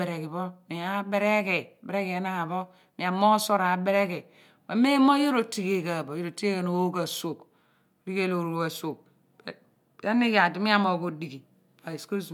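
No technical faults are audible.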